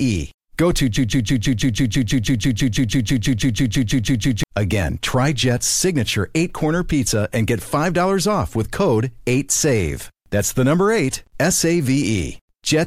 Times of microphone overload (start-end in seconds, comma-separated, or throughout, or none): none